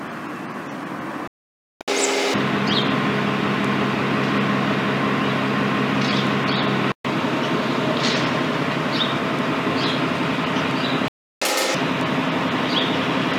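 Playback stall at 1.28 s: the sound cuts out mid-flow and stays silent for about 0.53 s, until 1.81 s, then resumes. A second stall at 11.08 s leaves a shorter gap of about 0.33 s, ending at 11.42 s. Each silence is most likely the player running out of buffered data or having its output thread blocked, so nothing reached the output until it recovered.

Catch-up at higher speed follows each stall, from 1.81 to 2.34 s and from 11.42 to 11.75 s. The player resamples its backlog at double speed, so the audio rushes and jumps up in pitch by roughly ten semitones. Each burst lasts as long as the stall before it, which wins back the lost time before playback drops back to normal speed and pitch.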